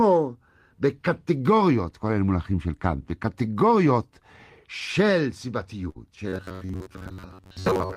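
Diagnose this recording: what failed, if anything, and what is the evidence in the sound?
Network stage: a burst of packet loss at 5.89–5.98 s and 6.55–6.64 s. Each gap is bridged by a fading continuation of the last sound, then about 60 ms is skipped.

Buffer stage: robotic sound from repeated short buffers, likely from audio arriving too seldom. From 6.28 s to the end, most of the audio is looped fragments, imposing a rigid 93.8 Hz metallic buzz, which fits a roughly 10.7 ms buffer.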